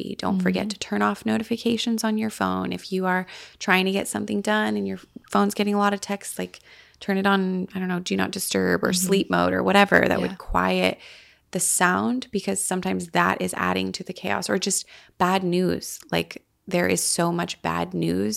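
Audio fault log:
No faults heard in the audio.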